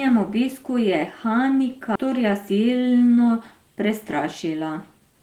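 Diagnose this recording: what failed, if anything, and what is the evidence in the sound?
Two faults here, both on the receive path of a network call. First, a skip ahead at about 1.95 to 1.97 s: the speech jumps forward with no gap filled, and roughly a second of audio is just gone. The two sides are butted together almost directly. That's a chunk of audio lost on the way or discarded by the buffer when it overflowed while newer audio was already queued, so the delay dropped by around a second in one step.

Second, a jitter buffer speed-up from about 3.89 s to 5.20 s. The speech runs about 106% of normal speed but keeps its pitch, so it comes across a bit hurried rather than chipmunky. The buffer was holding more audio than it wanted and trimmed it back by cutting out lots of tiny pitch-period-sized slices in a row, around a tenth of a second in total over that stretch.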